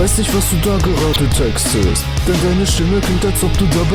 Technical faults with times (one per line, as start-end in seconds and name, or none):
1.13-1.16 corrupt frame decoded
2.69-2.75 corrupt frame decoded